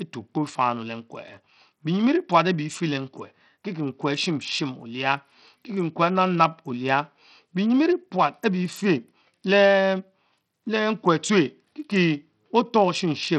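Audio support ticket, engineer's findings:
Speech band-limited throughout, nothing above 14 kHz; treble flickering, gritty grain and aliasing riding on the sound. Likely Bluetooth SBC compression on the A2DP link, heavily starved, fitting roughly 64 kbps. Coarse simple sub-band allocation drops top bands; unlike MP3 or AAC, no swirly pre-echo, just harsh grit.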